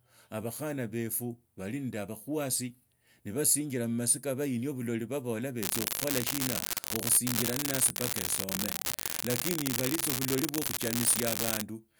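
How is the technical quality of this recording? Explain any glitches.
The recording has one fault in its second half. From 5.62 s to 11.62 s an unreliable data bit corrupts samples: a marginal data line flips its bit at random, adding identical spikes of about -7 dBFS. The result is a constant crackling fizz over the speech that persists through pauses.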